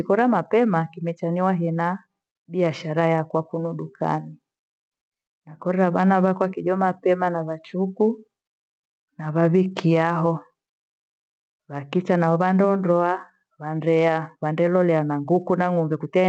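Gain pumping runs through the whole speech clip: the gain is pulled down on every loud sound, swinging by around 10 dB. The likely cause is a microphone gain set far too high, with a fast limiter clamping down on every peak and releasing between them. The call codec's band limit near 8 kHz can also be heard.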